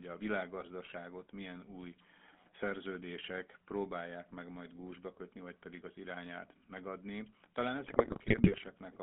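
The whole speech clip carries the GSM full-rate codec. The band runs from about 200 Hz to 3.5 kHz. The codec damage is plainly audible as a buzzy, gravelly roughness. It rebuilds the voice from a vocal-tract model fed by sparse pulses. That fits 13 kbps full-rate coding.

From 7.84 to 8.69 s, GSM bit errors break in. Corrupted bits reach the decoder. Wrong filter, pitch or gain values bend the spectrum or throw the level up, frame after frame. The voice squawks, pops and gargles. This points to an error rate near 2.4 percent.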